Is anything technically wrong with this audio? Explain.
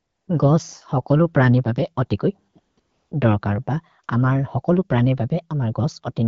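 Yes. AMR comfort noise fills 0 to 0.27 s and, after "हकलु प्रनि बबे अतिकोइ", 2.53 s, 2.59 to 2.77 s and 2.79 to 3.11 s. The phone judged these moments silent and stopped sending speech, so the receiver synthesised a smooth, steady noise that switches in and out.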